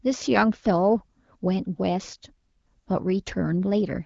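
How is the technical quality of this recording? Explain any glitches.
No glitches are audible in this speech recording, which carries the light coding coloration of AMR wideband (HD Voice) at 15.85 kbit/s and contains nothing above 7.6 kHz.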